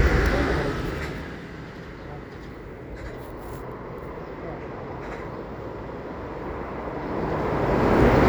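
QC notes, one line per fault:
Nothing to flag here; the sounds come across just as they should, with no problems to note.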